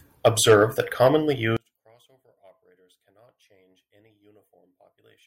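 One channel inverted from 1.57 s to the end of this speech clip, right after "that commonly": the voice suddenly drops by about 36 dB, leaving only a faint trace. The likely cause is reversed polarity on one stereo channel, so when the two channels are summed to mono the centred voice, which is nearly identical in both, cancels itself out, and only the small difference between them survives.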